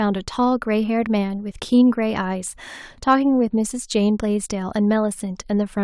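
A speech recording with no audible technical faults anywhere in the signal.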